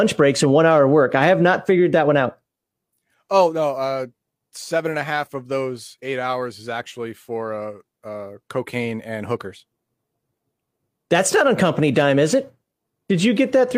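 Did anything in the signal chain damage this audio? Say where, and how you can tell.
No, nothing audible points to damage at any stage of the chain on this speech recording.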